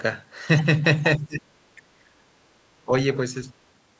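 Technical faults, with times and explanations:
1.18–1.5 s, 1.75–2.22 s and 2.82–2.92 s, speech suppressed in double talk: the speech abruptly sinks by up to about 25 dB in the first dip and about 20 dB in the others, then recovers. This is likely an echo canceller muting the near talker while the far end also spoke.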